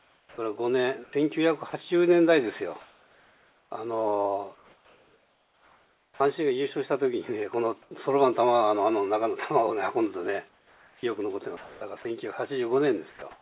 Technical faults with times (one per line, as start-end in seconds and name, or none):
0.00-1.73 sound chopped by the voice detector
2.81-3.71 comfort noise in place of the background
4.55-6.20 comfort noise in place of the background
6.12-6.20 onset clipped by the voice detector
7.82-7.91 sound dropped by the voice detector
10.49-12.05 sound chopped by the voice detector
13.10-13.22 sound dropped by the voice detector
13.10-13.41 comfort noise in place of the background